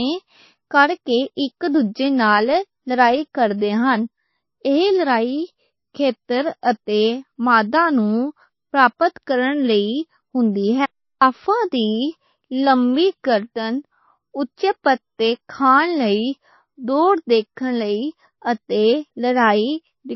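MP3 compression damage runs through the whole of this speech recording: nothing survives above 5.8 kHz, and quiet detail flickers in and out with a watery, swirly texture, likely from an encoder starved of bits, which fits a bitrate of roughly 24 kbps.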